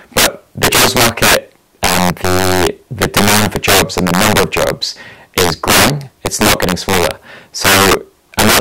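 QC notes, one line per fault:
Throughout, integer overflow: violent cracks on loud speech peaks as samples pushed about 17 dB too hot wrap to the opposite sign instead of limiting.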